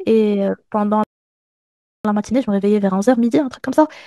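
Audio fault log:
1.04–2.05 s, playback stall: The speech cuts out mid-flow and the output falls silent for about 1.01 s. It then resumes where it left off. The likely cause is the player running short of data or its thread being blocked until it recovered.
2.05–3.97 s, time-compressed catch-up: Right after the stall, the speech runs about 1.5 times faster at its normal pitch. The player clears its backlog by dropping small slices and cross-fading the joins, which leaves a hurried sound.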